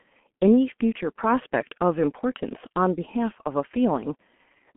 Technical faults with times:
0.00-4.76 G.723.1 codec

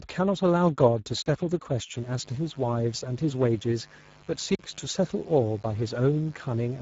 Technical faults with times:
0.00-6.81 Speex codec
1.22-1.26 block of digital silence
1.95-6.81 mains buzz
4.55-4.59 block of digital silence

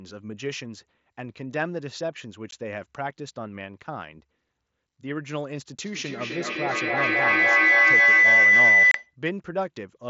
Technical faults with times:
2.51 unconcealed Bluetooth headset packet loss
5.84-9.16 feedback howl
8.91-8.95 unconcealed Bluetooth headset packet loss

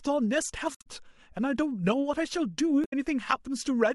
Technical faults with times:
0.75-0.87 damaged data in a compressed stream
2.81-2.93 damaged data in a compressed stream

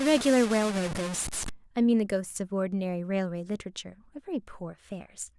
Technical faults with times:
0.00-1.50 low bit depth without dither

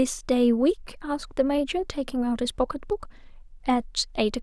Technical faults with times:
none

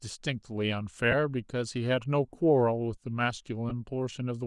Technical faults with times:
0.00-4.46 Bluetooth LC3 compression
1.11-1.14 lost LE Audio frames
3.69-3.72 lost LE Audio frames

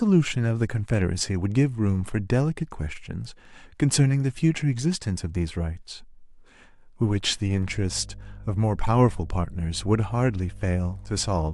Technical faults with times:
7.63-11.53 mains hum

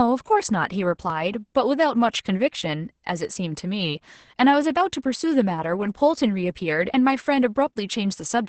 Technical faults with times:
0.00-8.48 Opus voice compression

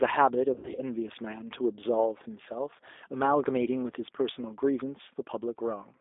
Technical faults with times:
0.00-6.01 G.729 codec
0.54-0.80 VoIP packet loss concealed by the speech codec

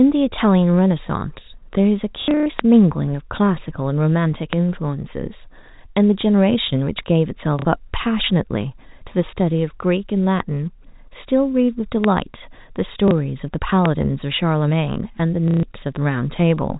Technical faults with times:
2.22-2.46 packet loss with last packet repeated
2.59-2.61 loud pop
4.53-4.55 loud pop
7.59-7.65 packet loss with last packet repeated
12.04-12.06 loud pop
13.08-13.11 packet loss with last packet repeated
13.86-13.88 loud pop
15.48-15.63 packet loss with last packet repeated

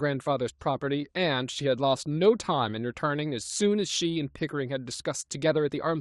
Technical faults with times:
0.00-6.01 clock drift between sender and receiver
0.18-5.40 repeated timing corrections

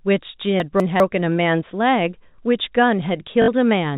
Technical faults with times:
0.60-1.00 chunks out of order
3.42-3.48 packet loss with last packet repeated

